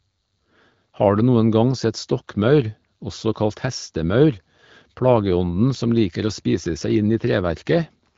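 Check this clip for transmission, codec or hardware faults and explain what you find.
Nothing in this clip points to a transmission, codec or hardware fault.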